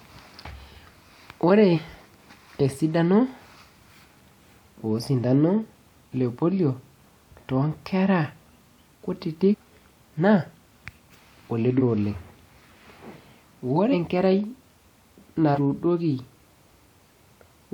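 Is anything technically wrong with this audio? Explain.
Yes. Compressed frames are skipped at 1.74–1.78, 9.50–9.55, 11.77–11.82, 13.91–13.94 and 15.54–15.58 s. Whole frames of about 46.4 ms never play, so the speech jumps ahead by roughly 50 to 200 ms. Each join is heard as an abrupt jump in the speech.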